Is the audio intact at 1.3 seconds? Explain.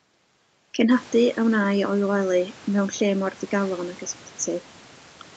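Yes, the speech at 1.3 seconds is intact, with no fault at that moment.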